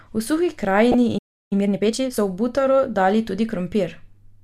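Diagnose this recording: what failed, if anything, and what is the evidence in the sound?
DAB burbling sits in the codec and reception chain. From 0.92 to 0.94 s the speech picks up brief blips of noise. Bit errors slipped past error correction into the MP2 data, with a bit error rate of a few tenths of a percent. This points to several corrupted frames with wrong samples in single sub-bands.

A playback stall follows at the player's buffer. The speech cuts to silence from 1.18 to 1.53 s, a gap of about 330 ms. It then resumes mid-flow. The likely cause is that the player ran dry of data or its output thread was blocked.

Time-compressed catch-up comes right after, also in playback. From 1.53 to 2.19 s the speech runs at 1.5 times normal speed with its pitch unchanged. The player is trimming and cross-fading small segments to work off the backlog from the stall.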